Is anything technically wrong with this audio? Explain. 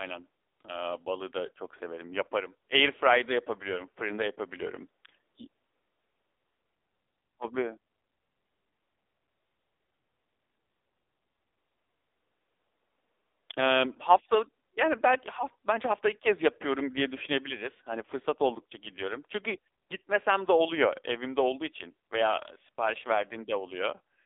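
Yes. Throughout, the speech has been through the AMR narrowband mobile codec. Nothing reaches past 3.7 kHz, the bottom cuts off near 300 Hz, and the heavy buzzy, synthetic quality of its pulse-driven vocal-tract model fits a low rate around 6.7 kbps.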